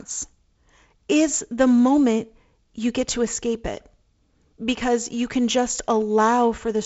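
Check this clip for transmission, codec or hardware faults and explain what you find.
The speech arrives over G.722 wideband telephone coding at 48 kbit/s, with content stopping around 7.7 kHz and only the light upper-band hiss and slightly noisier lower band that this coding rate brings, and nothing beyond that can be heard going wrong.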